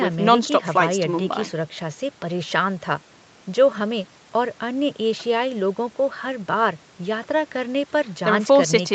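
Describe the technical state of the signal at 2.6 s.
At 2.6 s the speech is intact, with no dropout, click, distortion or other fault at that moment.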